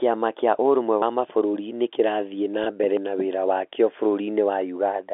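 At 1.02 s the speech jumps forward abruptly, with a short piece of around 50 ms gone and the two sides butted together with no silence. This is audio missing between chunks, likely from a recorder or processor working in 2 s blocks and dropping samples at each handover. At 2.64 s, for about 20 ms, the sound holds on a brief buzzy sustain rather than skipping. That is packet loss with pitch repetition, consistent with a single lost packet bridged by repeating the last pitch period. At 2.97 s, about two seconds after the first, a second chunk gap cuts out a similar slice. The regular spacing and bare splice mark these apart from the filled, tonal patch at 2.64 s, all heard through the 300 Hz to 3.5 kHz band of G.711 telephone coding.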